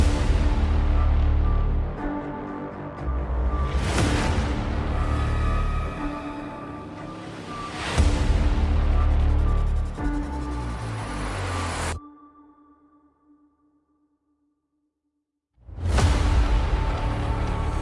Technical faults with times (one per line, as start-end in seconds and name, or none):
none